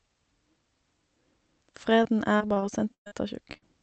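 From 2.03 s to 3.13 s the speech turns choppy and robotic, with pieces dropping out. This is repeated packet loss: seven separate gaps, the longest about 117 ms, left roughly 280 ms of the call undelivered. Each hole was patched by extending the preceding sound, and about 23% of the span is that stand-in audio. The gaps arrive too close together for the speech to settle in between, so the stretch sounds mechanical.

At 3.53 to 3.57 s there is a brief smear or wobble, a short concealed packet loss. About 20 ms of audio never reached the decoder in time, and the receiver covered it by continuing the last sound for about 21 ms before blending back into real signal. A gap this short leaves a momentary blur rather than an obvious dropout.

Straight after, from 3.57 s to 3.64 s, a burst of packet loss follows. About 40 ms in a row went missing, and the receiver stretched the previous sound across roughly 46 ms while turning it down. 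The result is a held buzz or fading hiss, then a jump to later audio with the intervening part gone. The call path's Opus coding at roughly 48 kbps, with its cut-off around 8 kHz, is the channel these losses occurred on.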